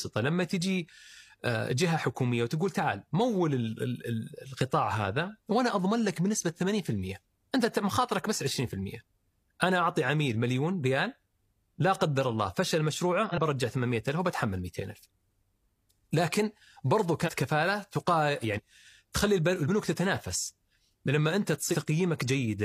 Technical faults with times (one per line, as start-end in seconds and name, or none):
13.24-13.38 compressed frames skipped
17.23-17.31 compressed frames skipped
18.53-18.60 compressed frames skipped
19.65-19.70 compressed frames skipped
21.69-21.75 compressed frames skipped